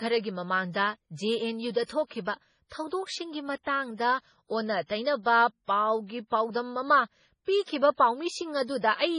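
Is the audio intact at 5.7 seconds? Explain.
No. MP3 compression affects the whole clip, including 5.7 s, and is the likely cause of what is heard there. With too few bits for the material, the encoder has removed everything above 10.5 kHz and dropped quieter frequency components that flicker in and out between frames. The speech sounds dull, watery and swirly, with smeared attacks. The damage is heavy, which fits a very low bitrate of around 24 kbps.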